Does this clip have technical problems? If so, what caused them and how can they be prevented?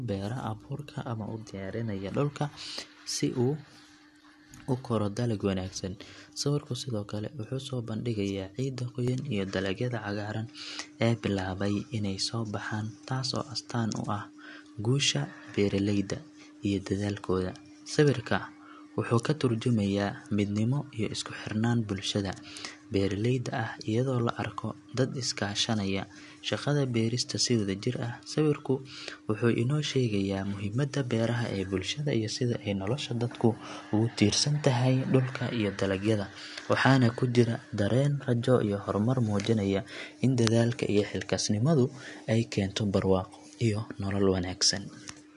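Yes. From 9.08 s, after "soo bandhigayaa ciidda", the speech dulls, losing content above 10.6 kHz and gaining faint new noise with no gap. The input likely switched to a poorer device. Locking recording to one chosen microphone and disabling automatic device switching prevents this.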